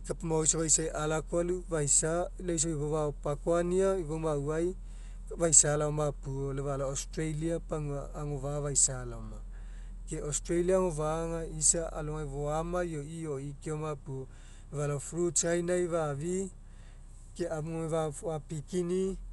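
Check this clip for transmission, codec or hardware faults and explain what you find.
There's one fault, and it runs the whole length of the speech: the sound of Dolby Digital compression, likely at a bitrate around 64 kbps. Nothing gets through above 11.4 kHz, so the top end is dull and closed in. Starved of bits, the encoder narrowed the band and left many frequency lines with no real detail, and the decoder filled them with dither noise. You hear that as a rough, fluttering haze clinging to the tonal parts.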